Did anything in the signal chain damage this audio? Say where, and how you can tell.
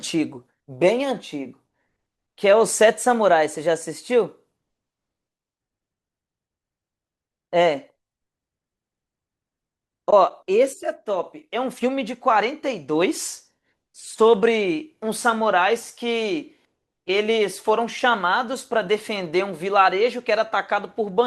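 Yes: an overlap between stream segments at 1.53 s, at the streaming and playback stage. Two segment timestamps overlapped, and the player trimmed about 5 ms of speech that wasn't actually duplicated. The waveform jumps there, heard as a tiny skip, consistent with 6-second segments.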